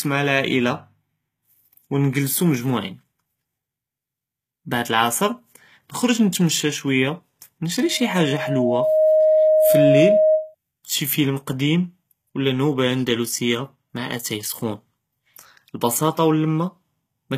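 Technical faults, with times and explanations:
Throughout, HE-AAC compression: the treble sounds synthetic and gritty, with sibilants taking on a metallic, lispy edge, and nothing is present above 14.9 kHz. This is likely the result of HE-AAC coding at a low bitrate, near 20 kbps. In that scheme, only the lower spectrum is coded properly, and the upper band is rebuilt by copying lower content upward under a coarse envelope. The rebuilt treble stays bright, but its harmonics no longer line up with the real ones, so the damage is plainly audible in the speech.
7.80 to 10.55 s, loudspeaker feedback squeal: a steady 625 Hz tone swells up over roughly a second and a half until it sits about 5 dB above the speech, then stops just before "נְשוּף פִילְם קדִים וְלא". A microphone was picking up the loudspeaker it fed, and at 625 Hz the loop gain exceeded one. That single frequency therefore reinforced itself on every pass around the loop and grew into a sustained howl.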